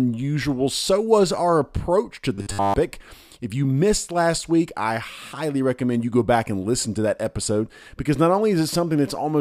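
At 2.35–2.74 s, after "was our approach to", robotic sound from repeated short buffers: a rigid 100 Hz buzz, likely a looping 10 ms chunk rather than silent dropouts.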